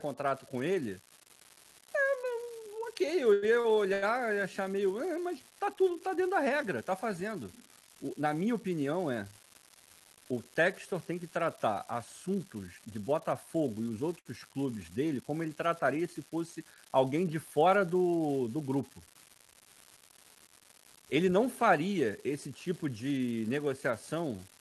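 Throughout the clip an unreliable data bit adds a steady crackle of equal-sized spikes, one marginal bit flipping at random. Unlike codec noise, it persists in pauses.

From 3.33 to 4.04 s, between "ok eu" and "e achar meio", repeated stalls (stutter) occur: the jitter buffer ran dry three times, and the last sound was extended to fill about 30% of the span, with the longest gap 89 ms. The speech drags and hiccups, but nothing is lost.

From 9.11 to 11.76 s, after "na minha opinião" and up to "assuntos de", a jitter buffer speed-up trims short pitch-period pieces, about a tenth of a second in all. Delivery runs 3% faster at unchanged pitch.

From 14.19 to 14.27 s, a short stall from a late packet holds one sound for 64 ms before resuming in place. It is a single brief buzz or dip, not a run of stutters.

From 20.17 to 21.81 s, just before "esse tipo", another jitter buffer speed-up removes roughly a twentieth of a second, again 3% faster at the same pitch.

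Over the whole clip, the Opus call path limits the band to about 12 kHz, which fits a bitrate near 32 kbps.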